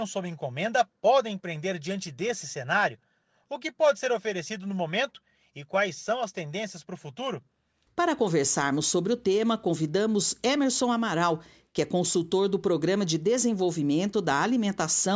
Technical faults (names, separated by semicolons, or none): none